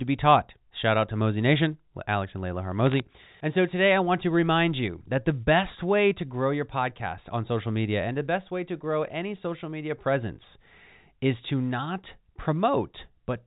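From 2.87 to 3.00 s, bit errors on a digital phone line produce a brief burst of crackle. A small fraction of bits flipped in the G.711 stream, each corrupting one sample. Hits on sign or high bits give sharp ticks over the band-limited speech.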